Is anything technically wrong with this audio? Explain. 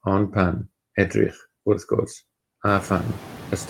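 Yes. Throughout, noise suppressor artifacts occur. A suppressor cuts bands it judges steady noise by about 19 dB, frame by frame. The background drops between words and swells back under speech, even after the room noise itself climbs around 2.5 s.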